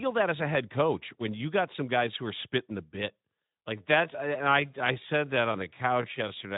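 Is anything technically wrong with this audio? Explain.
Yes. From 3.58 s, right after "are spitting the bit", to the end at 6.57 s, the speech suddenly slows to about 0.7 times its pace. This is likely a time-stretched section, where software lengthened the passage by repeating short slices while keeping pitch. The result drags. Unlike a slowed playback rate, the pitch doesn't drop. The audio is also band-limited to about 3.8 kHz by the Speex codec.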